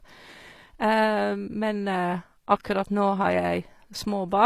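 Right through the speech, the treble is synthetic and gritty, with nothing above 14.9 kHz, likely HE-AAC compression rebuilding highs from copied lower bands, fitting a low bitrate around 24 kbps.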